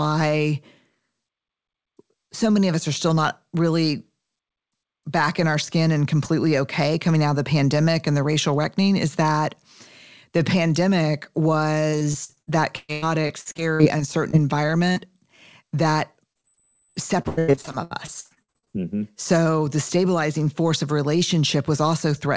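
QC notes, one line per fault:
11.90–14.98 s and 16.33–18.68 s, repeated packet loss (robotic sound): two choppy stretches where short holes arrive one after another, 20 in the first run and 24 in the second, the longest about 117 ms and 91 ms. Each hole gets papered over by stretching the last bit of sound, so roughly a fifth, then a third, of each stretch is fill. That's the robotic buzz, heard over the call codec's band-limited sound that stops at 8 kHz.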